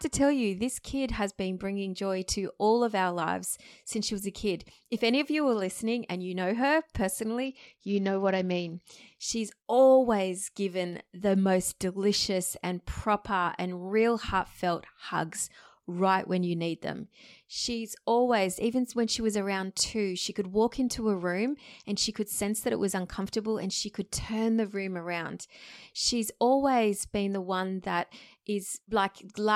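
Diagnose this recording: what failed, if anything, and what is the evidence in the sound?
Codec stage, a Bluetooth SBC bit pool drop: from 7.45 to 8.92 s treble dulls and gritty noise rises, which fits a pool falling to about 9. Starved top sub-bands and coarse quantisation give grit, not just the muffling of a low-pass filter.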